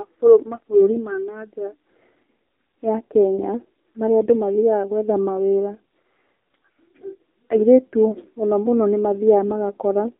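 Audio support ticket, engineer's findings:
Buzzy, synthetic speech throughout, nothing above 4 kHz. AMR narrowband mobile codec: 8 kHz vocal-tract model, sparse pulse excitation, damage fitting a low AMR-NB mode near 7.4 kbps.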